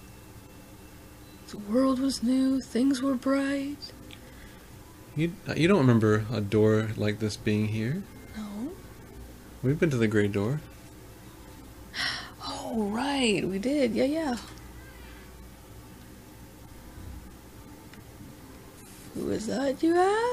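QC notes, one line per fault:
No faults found. Nothing in the audio calls for a QC entry.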